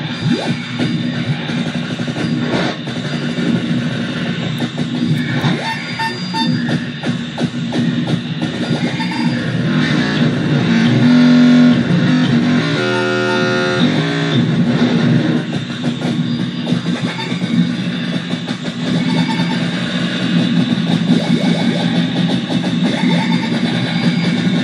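At 18.79 s a doubled audio track kicks in and runs right to the end: a second, full-band copy of the sound sits roughly a fifth of a second behind the original, at about the same level. It snaps in abruptly with no decay or room colour, so everything sounds stuttered and smeared rather than reverberant. It's likely the audio being picked up twice, once through a slower path, or an edit leaving two copies out of step.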